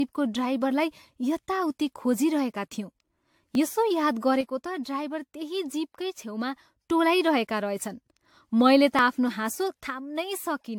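From start to finish the speech has a swirly, hollow, smeared quality, with consonant attacks blurred. This is generation loss: the audio has likely been decoded and re-encoded around ten times with AAC-LC, in a chain that sounds consistent with a moderate bitrate near 96 kbit/s. Each pass quantises on a shifted frame grid, so the noise and spectral holes pile up beyond what a single encode would leave.

At 3.55 s there is a tiny forward jump in the sound and no gap of silence. This is a dropped buffer from an overrun. The program likely failed to collect its samples before the hardware overwrote them, so roughly a millisecond and a half is missing and the two sides are spliced together. The same skip recurs at 8.99 s.

From 4.41 to 6.81 s the level abruptly sinks by about 6 dB and then returns, and it sinks again from 9.88 s to the end. This is one channel dropping out of the stereo pair. 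The likely cause is a lost channel feeding the mono sum: material common to both sides loses half its contribution, and anything present only in the missing channel vanishes.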